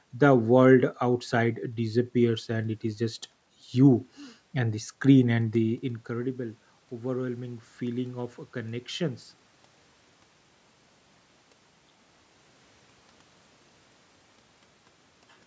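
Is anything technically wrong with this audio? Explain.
Yes, there is one fault. From 5.63 to 9.29 s, automatic gain rising can be heard. Just before it starts, the talker moves back and the level at the microphone drops by about 15 dB. The gain control reads this as a quiet input and slowly turns itself up by about 6 dB. The speech and the room noise swell together over more than three seconds, rather than the voice alone getting louder.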